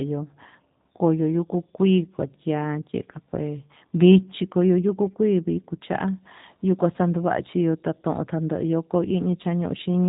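From start to finish the speech passes through a G.729 codec, rebuilt from a vocal tract filter, pitch prediction and a few pulses per frame, which fits an 8 kbit/s stream. It sounds plainly rough and synthetic, and a spectrogram shows nothing above 4 kHz.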